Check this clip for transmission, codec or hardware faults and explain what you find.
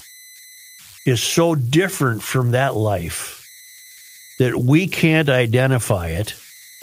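The speech clip has one hardware fault, converter idle tones, present throughout. With no dither, the delta-sigma converter locks into repeating bit patterns when the signal is small, and those patterns produce a tone around 2 kHz, set by the input's offset. The error sits about 26 dB below the signal. On a spectrogram this appears as a steady horizontal line near 2 kHz, clearest in pauses. In the waveform, pauses show a fine repeating ripple instead of settling quietly.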